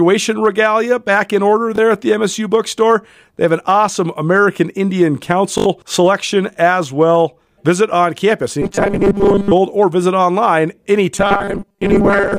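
Right after "regalia back in order", at 1.76 to 1.78 s, there's a repeated buffer: a tiny chunk plays twice with a hard join. At 5.58 to 5.66 s, before "selection as well", the same chunk repeats four more times, a stutter that swallows around 70 ms of audio. Both fit a 20 ms buffer.

From 8.62 to 9.53 s, between "on campus" and "or visit online", and again from 11.16 s to the end at 12.39 s, you get robotic sound from repeated short buffers. It's a rigid 200 Hz metallic buzz that loosely tracks the speech, likely because most of the audio there is short repeats standing in for skipped material.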